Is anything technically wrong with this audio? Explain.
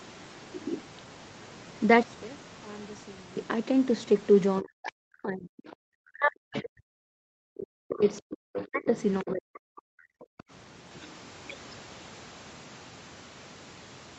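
Yes, there are four kinds of fault.

From 2.03 to 3.37 s the voice nearly vanishes, falling by about 22 dB and leaving a faint trace. The likely cause is one channel inverted: with one stereo side's polarity reversed, the shared centre content cancels when the two are summed to mono.

Between 4.61 and 5.76 s, 6.12 and 8.27 s, and 8.66 and 9.97 s, the talker dips sharply, losing up to roughly 40 dB in places. This is speech suppressed in double talk, likely because the echo canceller could not separate the talker from the loudspeaker echo while both sides spoke, so it turned everything down.

A second voice sneaks in at 6.53 to 6.61 s and 7.99 to 9.31 s, around 15 dB below the talker, and again faintly at 10.20 to 10.43 s, about 30 dB down. This is the other side's voice leaking through, likely from a loudspeaker whose echo was not fully cancelled at the microphone.

From 10.25 to 10.45 s, the room sound briefly drops out, sinking by about 40 dB for roughly 150 ms. 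This is background gated by the echo canceller: it clamped the microphone hard while the loudspeaker played, then released it.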